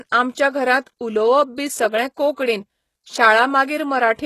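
Right through the speech, the top end stops dead above about 12.3 kHz. The treble above the coded band sounds rebuilt rather than real, with the damage plainly audible. That's likely HE-AAC compression copying lower bands upward, at a bitrate low enough to point to around 16 kbps.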